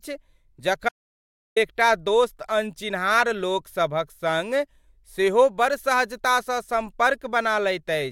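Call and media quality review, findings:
Audio dropout to silence, 0.89–1.56 s: speech cuts out mid-flow for about 0.68 s, returning at "एकटा दोस्त अनचिन्हार लोक". Gap is silent with no room tone, unlike a noise gate or concealment fill. Likely input/link loss while the encoder kept writing silence.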